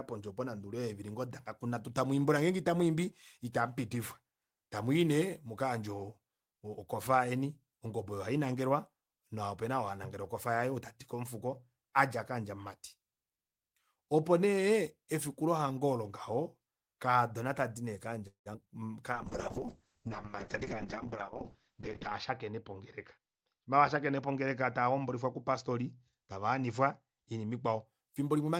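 From 18.27 to 18.68 s the speech breaks up with repeated packet loss, producing a robotic sound. Four holes fall in under half a second, the longest about 182 ms. Each was bridged by stretching the preceding sound, covering roughly 206 ms, with another 60 ms simply missing. About half of that stretch is synthetic fill, so it comes across as choppy, with fragments dropped out.

A call bitrate drop follows at 19.14 s and lasts until 27.93 s. The encoder was forced onto far fewer bits, and the sound fits a fall from 32 kbps to about 6 kbps. It stays at the lowest level for about 3.1 s. Coding becomes coarse and the audio turns rough and watery. The audio bandwidth also shrinks from 20 kHz to 8 kHz, so the top end is cut away and everything sounds muffled until the rate climbs back.

Within that low-bitrate stretch the jitter buffer speed-up occurs twice. The receiver was holding more audio than it wanted and trimmed short pitch-period slices to bring the delay down. 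From 20.56 to 20.74 s it runs at 117% speed, shedding roughly 40 ms. From 21.22 to 22.76 s it runs at 106%, removing around a tenth of a second. Pitch stays unchanged, but the speech sounds hurried in both spots, most noticeably in the first.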